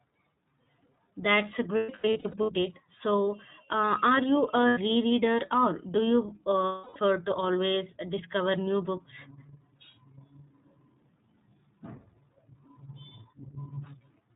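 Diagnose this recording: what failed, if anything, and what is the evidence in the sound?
Codec stage: the iLBC codec is audible throughout, with nothing above 4 kHz and a rough, synthetic edge on the speech. This fits 30 ms frames at about 13 kbps. The grain separates it from a simple low-pass filter.

Network stage: there are lost iLBC frames at 1.77–2.50 s (scattered, with runs up to about 0.1 s), at 4.68–4.78 s after "uh are you", and at 6.66–6.97 s before "to always". Each gap is a held, buzzy vowel that recovers at once, not the silence of a dropout.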